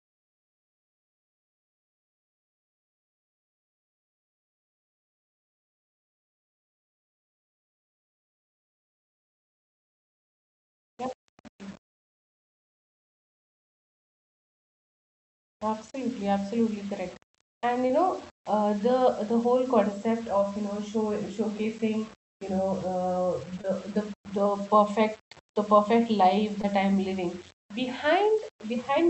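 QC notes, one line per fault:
Throughout: low bit depth without dither. Grainy distortion tracks the speech, sitting about 30 dB down; likely coarse rounding, around 7-bit, with no dither.
15.48 to 15.72 s: burst of packet loss. Last sound held and faded for about 70 ms, then speech jumps ahead, roughly 80 ms of it gone.
17.87, 23.61 and 26.61 s: short concealed packet loss. Each about 20 ms lost, patched by extending the prior sound, so you hear a brief smear or wobble.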